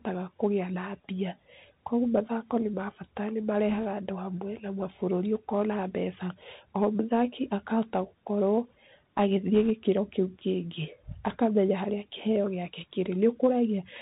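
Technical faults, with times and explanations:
Throughout: Bluetooth CVSD headset codec. The speech is band-limited, with nothing above 4 kHz, so it sounds boxed-in and narrow. A granular hiss sits under it, s sounds come out scratchy, and loud bright moments distort because the one-bit up/down steps can't climb fast enough. The damage is plainly audible and fits a 64 kbps CVSD stream. Unlike bit errors, this texture is constant rather than arriving in bursts.
3.69–3.84 s, 9.55–9.71 s and 11.27–11.37 s: bit errors on a Bluetooth voice link. The first falls between "bata nĩ" and "andũ hamwe na", the second just before "kĩu kĩngĩ", and the third between "kĩu kĩngĩ" and "harĩa kĩheo gĩake". Each is a short rushing, crackly wash laid over the speech, which points to an error rate of roughly 1.5 percent. Because every CVSD bit carries the same small weight and the decoder recovers quickly, there are no loud clicks or dropouts. 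Only brief noisy roughness is heard, which sets these apart from packet loss.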